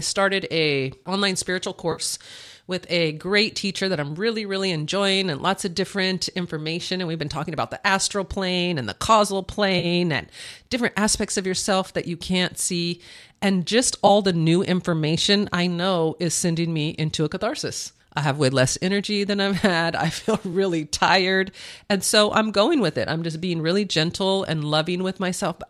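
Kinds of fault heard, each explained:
AAC frame loss with concealment: three brief dropouts where missing coded frames were patched from the last good spectrum, leaving smeared, noisy patches rather than clean gaps. They fall at 1.92 s after "a online spiritual" (about 0.1 s, the longest), at 9.79 s between "plane and the causal" and "and different aspects of" (0.07 s), and at 14.07 s just before "the new information I" (0.03 s). All are too short to fade to silence. The light, low-delay coding around them is likely AAC-ELD.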